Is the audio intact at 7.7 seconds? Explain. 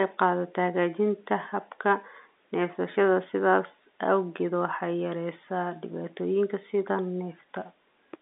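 Yes, the audio is intact at 7.7 seconds, carrying only the narrow telephone band of its G.711 coding with nothing above about 3.9 kHz.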